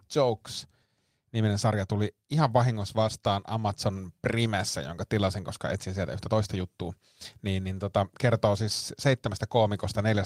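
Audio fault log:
Listening through the speech, nothing stood out.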